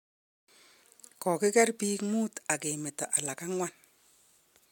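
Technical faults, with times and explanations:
Nothing here stands out as a technical fault; the speech just comes through as recorded, with no dropouts, clipping or glitches to point to.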